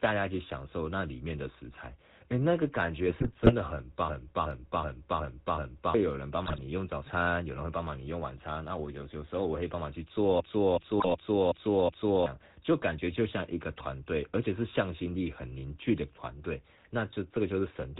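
GSM full-rate codec runs through the whole recording: the speech is synthesised from a vocal-tract model driven by sparse, regularly spaced pulses, with nothing above 4 kHz. It leaves a plainly audible buzzy, gravelly roughness, consistent with a 13 kbps GSM stream.

GSM bit errors strike from 3.06 to 3.53 s, again from 6.46 to 6.59 s, and from 10.98 to 11.08 s. Corrupted bits reach the decoder and scramble the filter, pitch and gain values, so the speech twists into squawks, pops and gargling during those spans.

A system hang loop occupies 4.09 to 5.94 s and again 10.40 to 12.26 s. The system froze while the playback hardware kept cycling one 0.37 s stretch of buffer, which fits a 16384-sample buffer. Each time, that fragment repeats five times at about 2.7 per second, a stuttering judder, and roughly two seconds of audio are lost. The third burst of bit errors falls inside the second loop.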